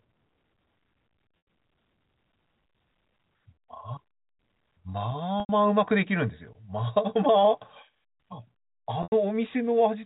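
Speech over a telephone-band G.711 link has three dropouts from packet loss with pitch repetition, at 1.38, 5.40 and 9.03 s. Each gap lasts 90 ms, which points to roughly three lost packets. The receiver fills each gap by repeating the last pitch period, so the sound briefly holds with a buzzy, frozen quality. That repetition fades out over about 50 ms and leaves a short silence. The speech then returns through a brief cross-fade.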